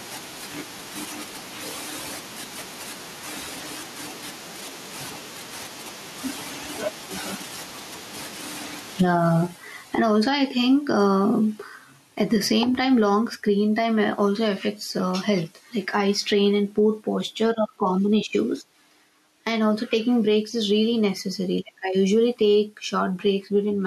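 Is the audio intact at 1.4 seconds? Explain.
No. At 1.4 seconds, as throughout the speech, gain pumping is audible: loud and soft parts are pulled closer in level and the sound is squashed, with the level swinging by around 35 dB. This likely comes from input gain set far too high and a fast limiter clamping it back down. On a waveform the envelope looks flattened, with peaks pinned near one ceiling; a spectrogram shows the noise floor brightening between sounds and darkening under them.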